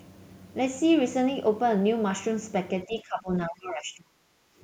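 From 2.86 to 3.29 s the speech sinks by around 15 dB, then from 3.46 to 4.44 s it falls much further, by roughly 35 dB, nearly vanishing. This is speech suppressed in double talk, likely an echo canceller muting the near talker while the far side spoke. The waveform shows the envelope collapsing in those spans, and the spectrogram shows the energy fading, almost to blank in the second span.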